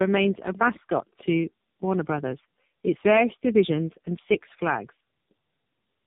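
Tandem speech coding runs throughout the speech. It was decoded and re-encoded at each link, with two low-rate AMR-NB passes likely around an A-law hop, each compounding the last one's damage. It sounds rough, muffled and warbly, with nothing above 3.8 kHz.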